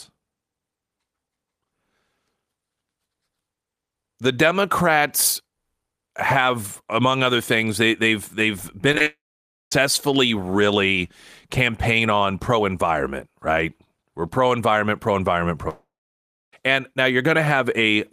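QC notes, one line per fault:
8.92–9.06 s, short concealed packet loss: three quick gaps right after "things they they've they've", each under a few hundredths of a second, patched by stretching the last sound, so you hear smeary little wobbles.
9.06–9.72 s, long network dropout: straight after those glitches, roughly two-thirds of a second goes missing, likely a network dropout. A brief fading continuation gives way to about half a second of silence before the audio resumes with that stretch gone.
15.68–16.53 s, long network dropout: after "pro environment pro environment", about 0.84 s vanishes, likely the same cause. A short fading tail is followed by around 0.65 s of silence, and the audio picks up further on.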